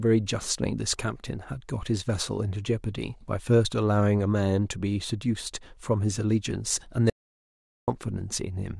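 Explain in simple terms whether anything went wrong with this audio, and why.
An audio dropout to silence happens at 7.10 seconds and lasts until 7.88 seconds, just under 0.8 seconds. The speech cuts off abruptly, and the gap is dead silence, with not even the faint background hum of the room. Then the speech snaps back in partway through. The likely cause is that the signal from the microphone was briefly lost, through a loose connection, a failed link or an accidental mute, while the recording carried on storing nothing but silence. Whatever was said during that moment is gone for good.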